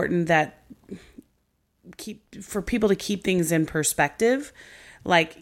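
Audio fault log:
No faults heard anywhere in this speech recording.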